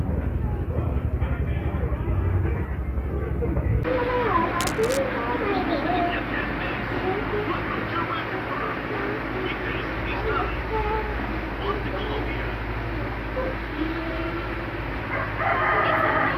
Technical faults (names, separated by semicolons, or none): cable scratch noise